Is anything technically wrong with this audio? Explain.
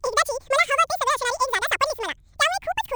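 Yes. Throughout, the speech plays twice as fast and an octave high. The audio was read two samples at a time, so each sample pair counted as one frame.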